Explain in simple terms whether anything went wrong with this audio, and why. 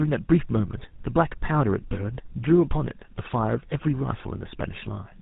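Tandem speech coding runs the whole clip. The speech sounds rough, muffled and warbly, as if squeezed twice by a phone-network coder, with nothing above 3.8 kHz.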